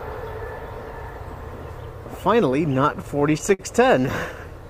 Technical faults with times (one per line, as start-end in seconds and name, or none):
2.75-3.61 repeated stalls (stutter)